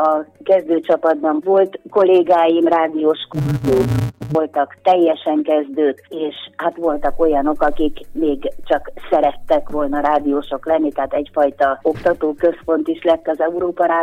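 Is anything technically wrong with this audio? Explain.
Yes, from 3.33 to 4.35 s there's interleaved audio read as planar: 5.8 ms blocks, which fits 256 samples, get split wrong, so it sounds dull and robotic with a 172 Hz buzz.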